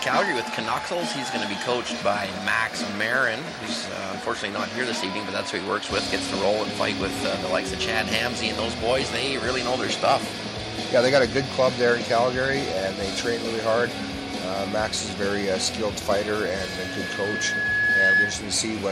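From 16.3 s to 18.44 s, the microphone picks up its own loudspeaker and the loop gain passes one at 1.7 kHz: a loudspeaker feedback squeal. The tone swells over about two seconds into a piercing whistle, finishing about 5 dB above the sound.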